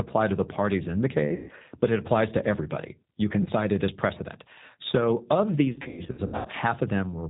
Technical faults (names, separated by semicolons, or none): G.729 codec; VoIP packet loss concealed by the speech codec